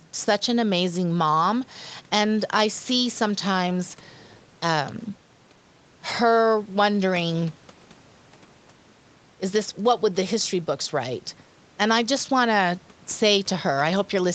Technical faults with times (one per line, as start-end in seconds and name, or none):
none